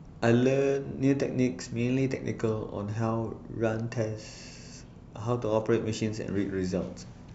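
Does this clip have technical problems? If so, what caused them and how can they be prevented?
No, there are no technical problems to point to anywhere in this speech recording. With nothing going wrong, there is no cause to trace and nothing that needs preventing.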